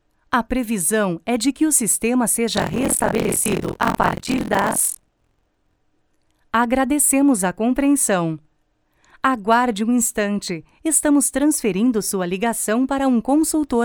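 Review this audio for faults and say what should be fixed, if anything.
Buffer tearing runs from 2.55 s to 5.78 s as a rough, robotic buzz at about 43.1 Hz, which fits a 1024-sample buffer. The writer and the hardware read pointer have drifted so they cross inside each period: roughly a third of every buffer plays stale audio about 50 ms old, with hard joins at both edges, and that repeating discontinuity produces the rattle. Prevent it by keeping the writer a fixed margin ahead of the read pointer and resynchronising on underrun.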